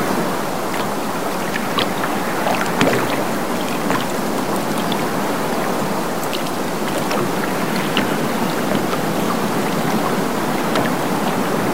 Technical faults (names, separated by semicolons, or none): low bit depth without dither